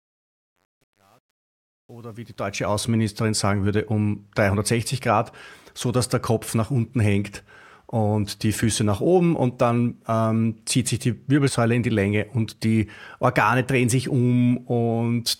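From 0.0 to 2.81 s, the fade-in shows truncation distortion on a fade. The quiet start turns gritty, worst until 2.34 s. The fade stage kept too few bits, consistent with 9-bit truncation, and used no dither. It clears before "sagen würde um".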